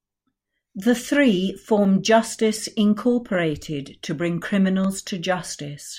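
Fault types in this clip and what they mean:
Clock drift buffer slips: clicks land in the speech at a steady 1.5 s spacing, around four of them between 0.36 and 4.84 s. The likely cause is two devices running on separate clocks that disagree by a couple of hundred ppm, so the buffer between them slowly drifts until a chunk of roughly 15 samples gets dropped or repeated. That tiny splice in the waveform is what you hear as each click.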